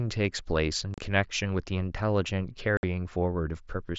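At 0.94 to 0.98 s, and again at 2.77 to 2.83 s, there's unconcealed Bluetooth headset packet loss. The headset link dropped roughly 37.5 ms and then 60 ms of audio, and nothing filled the gaps, so the speech just cuts out with hard edges over the otherwise light mSBC grain.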